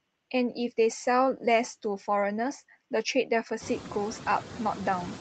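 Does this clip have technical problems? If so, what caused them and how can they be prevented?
Yes. Noise suppressor artifacts run through the whole clip. The suppressor estimates steady background noise in each frequency band and pulls those bands down frame by frame, here by about 13 dB. The noise therefore sinks in the gaps between words and comes back up underneath them. The room noise jumps by about 23 dB at around three and a half seconds and then sits only about 15 dB below the speech. To prevent this, reduce the room noise at the source and move the microphone closer, so the suppressor has less to remove.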